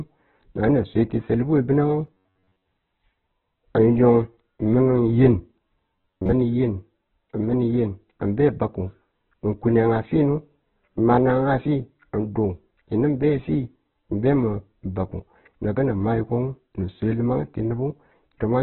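Heavy Opus compression runs through the whole speech clip. Nothing is heard above about 4 kHz, so the sound is narrowband and dull. Tones come out grainy, rough and noisy instead of clean. This fits Opus in its music (CELT) mode, likely at a very low bitrate near 8 kbps. There are too few bits to code each band properly. The encoder fills the gaps with folded or noise-like energy.

From 2.07 to 2.68 s, robotic sound from repeated short buffers appears. The speech turns into a hard, metallic buzz at about 94 Hz. It still loosely follows the talking. The same fault returns from 5.96 to 6.33 s with the same buzz. Most of each span is repeated audio, while the real audio is skipped. A buzz at 94 Hz points to a repeated chunk of about 11 ms. Audio likely arrived too slowly, so the last buffer was played again and again.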